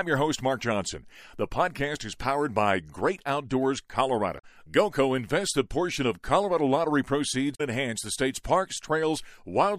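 At 4.35 to 4.45 s and again at 7.51 to 7.61 s, damaged data in the compressed stream breaks through as a short disruption. Corrupted frames are misread, the decoder loses sync, and about 90 ms is disrupted before it locks onto a valid frame header.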